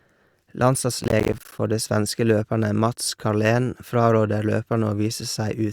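From 1.01 s to 1.59 s the speech is broken up by processor overload crackle. For just over half a second the system fails to deliver its audio buffers on time, and each missed block, roughly 10 ms long, is replaced by silence. Around twenty of these dropouts fall in that span. Each one has abrupt edges, so the speech sounds torn and gritty, with a rapid crackle riding on it, and it clears once the load eases after 1.59 s.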